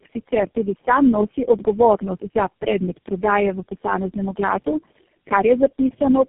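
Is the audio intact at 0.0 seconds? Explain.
No. From the very start the speech already sounds rough, muffled and warbly, with nothing above about 3.7 kHz, and it stays that way through the whole clip. This is tandem speech coding: the call was decoded and re-encoded at each link, so every speech codec worked on the previous one's damaged output. The sound suggests about four low-rate speech coders in a row, with the final stage consistent with GSM full rate.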